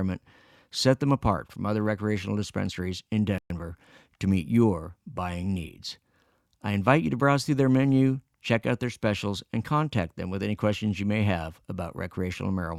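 At 3.38 s the speech cuts out abruptly. The output stays silent until 3.50 s, a gap of 120 ms. This is a playback stall. The sound stops mid-flow rather than fading, then picks up again. A gap this long is easy to notice as a hiccup in the delivery. The likely cause is the player running short of data, or its output thread being blocked, so nothing reached the output until it recovered.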